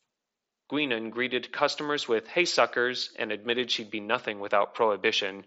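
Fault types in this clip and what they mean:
No faults can be heard in this speech clip.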